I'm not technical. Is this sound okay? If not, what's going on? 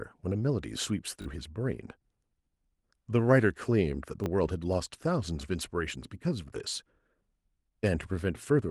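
No. At 1.22 to 1.26 s the speech stutters: a repeated buffer, where fresh audio arrived late so the same tiny slice, consistent with a 20 ms buffer, played two extra times, losing around 40 ms. At 4.24 to 4.26 s it happens again, with one extra repeat.

From 4.43 to 4.49 s the speech turns briefly rougher and noisier, a lost packet rebuilt from error correction. What sounds like two dropped packets were filled in from a lower-quality backup copy carried in the next packet, so there is no silence, only about 40 ms of coarser sound.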